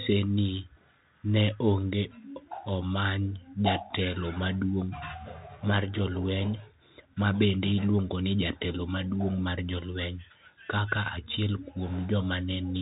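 Throughout, a Bluetooth CVSD headset codec's one-bit slope coding removes everything above 3.8 kHz, so the speech sounds narrow, with scratchy s sounds and granular hiss.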